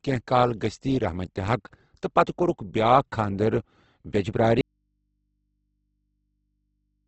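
From the first moment the speech has that rough, grainy texture you get from Opus compression, most likely a low-rate encode, something in the region of 16 kbps. Nothing reaches above about 8.2 kHz, so the top end is gone. The character points to Opus's CELT mode: it keeps each band's energy but, starved of bits, fills the detail with folded or noise-like content, so the voice sounds coarse and hashy rather than swirly.

Then at 4.61 s the speech cuts out abruptly and never returns, running on to the end of the clip. What's left in that gap is a low mains hum, sitting very far below the speech level. That's an audio dropout to a faint residue. The signal feeding the chain was most likely lost while everything downstream stayed live, which is why the hum of an open input carries on instead of clean silence or a fade.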